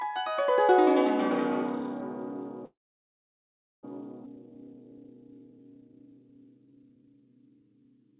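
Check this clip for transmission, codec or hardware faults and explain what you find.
Four faults turn up in the music, all from the call and playback chain, heard over a band-limited path with nothing above 4 kHz, which fits G.711 mu-law at 64 kbps.

From 1.11 to 2.11 s there is a loudspeaker feedback squeal. A microphone is picking up its own loudspeaker, and the loop gain passes one at 4.2 kHz. The tone swells over roughly 0.7 s until it sits about 5 dB above the music.

From 2.65 to 3.85 s comes a call audio freeze, likely from packets delayed in transit that emptied the jitter buffer. The last sound trails off briefly, then about 1.08 s of silence follows. Playback resumes where it stopped, nothing lost but 1.18 s late.

At 4.25 to 4.28 s there is a skip ahead. A stretch of audio was dropped while later audio was already waiting, so roughly seven tenths of a second of music vanishes and the two sides are joined across a gap of only 9 ms.

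From 4.36 to 8.16 s a jitter buffer slow-down follows. Short pitch periods are repeated to rebuild the buffer's reserve, adding 479 ms. The music plays at 88% speed without changing pitch, sounding dragged.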